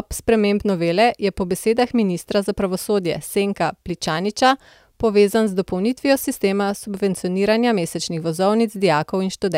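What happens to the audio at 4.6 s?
Nothing goes wrong at 4.6 s; the speech carries on intact through that moment, with no dropout, click or distortion.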